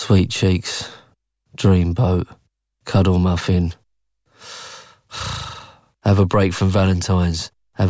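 No technical faults can be heard anywhere in the speech.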